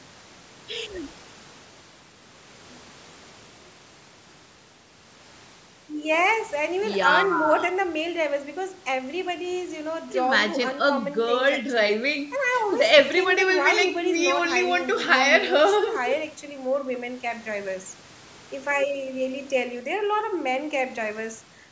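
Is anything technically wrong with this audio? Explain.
No, nothing's wrong here: the speech just carries the usual call microphone processing, with the lowest bass trimmed away and nothing above about 8 kHz, which is how that path normally sounds.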